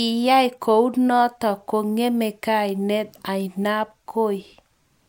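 Speech recording with no audible technical faults at any point.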